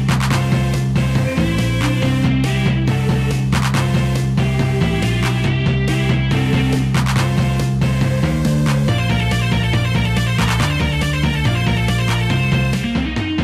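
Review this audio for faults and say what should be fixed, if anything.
Nothing here needs fixing; I listened through and didn't catch a single technical fault worth flagging.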